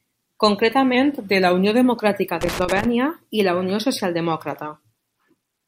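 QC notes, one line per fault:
0.95–1.85 s, drift correction step: Clock-matching software likely changed the playback rate in a single step to rebalance its buffer, slowing the audio by 5.4% and lowering pitch by about 97 cents, close to a semitone, before both snap back to normal.
2.41–2.85 s, loose connector crackle: A worn or dirty contact in the signal path makes and breaks rapidly, chopping the signal into an irregular burst of scratchy crackle that ends just before "i la".
4.27 s to the end, Bluetooth SBC bit pool drop: A congested wireless link forced the encoder to spend fewer bits, consistent with the bit pool halving from 28 to 14, near 108 kbps. The upper sub-bands are starved and the rest coarsely quantised, so treble dulls and gritty noise rises.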